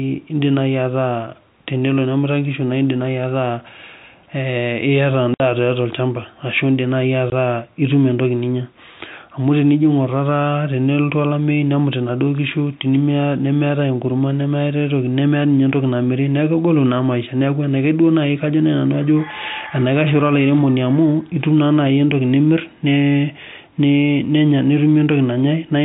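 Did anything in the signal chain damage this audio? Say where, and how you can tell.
Yes, at the network stage: packet loss filled with silence. The speech drops to dead silence from 5.34 to 5.40 s (60 ms) and again for 20 ms at 7.30 s, each gap with hard edges. Both lengths are whole multiples of 20 ms, which fits three lost 20 ms packets and then one. A driver or buffer underrun would not land on a packet grid like that. Packet-loss concealment would have smoothed or repeated the sound rather than leaving silence. The telephone band above it, with nothing past 4 kHz, is the G.711 coding behaving as designed.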